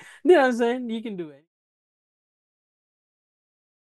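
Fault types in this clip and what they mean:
Nothing stood out on listening to this speech clip, and the smooth fade-out ending at about 1.5 s is an ordinary edit.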